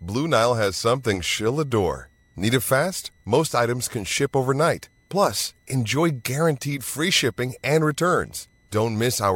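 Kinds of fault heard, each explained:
Switching supply whistle: A high whistle near 2 kHz, wandering between about 1.94 and 2.02 kHz, sits under the speech for the whole clip. It is faint, roughly 45 dB below the signal. A switching power supply running in an audible burst mode or beating with another one is the cause.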